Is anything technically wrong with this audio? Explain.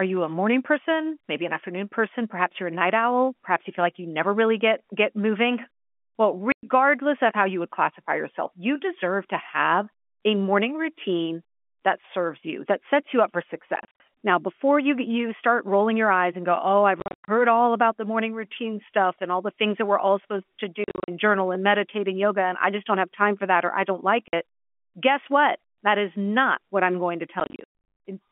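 Yes. Packet loss filled with silence occurs six times. At 6.52 s, just before "of how you would", 110 ms drops out. At 24.28 s, after "or I don't like", 50 ms goes missing. Clusters of short gaps hit 13.76–14.0 s (140 ms lost), 17.0–17.28 s (220 ms, longest run 100 ms), 20.84–21.08 s (180 ms), and 27.4–27.67 s after "what I'm going to" (380 ms, longest run 110 ms). Lost packets were replaced by digital silence. The gap sizes fit 10 ms packets. The speech stops dead and restarts with hard edges. The G.711 line coding underneath is narrowband.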